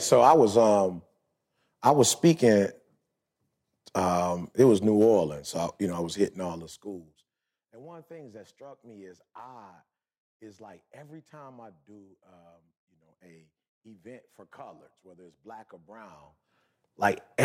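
Level changes applied in coarse steps without smoothing cause zipper noise in this speech: a fast ticking, about 40 steps per second, during the roughly 25 dB fade-down from 6.48 to 7.69 s and the rise from 16.00 to 16.63 s.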